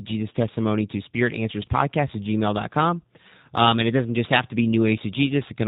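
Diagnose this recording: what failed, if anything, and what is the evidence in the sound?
What failed is the codec stage: the whole recording has the G.729 codec sound, and it's plainly audible. Everything above 4 kHz is gone, and the speech comes out rough and synthetic. It's being rebuilt from a vocal-tract filter, a pitch predictor and a few pulses per frame, which fits an 8 kbit/s stream.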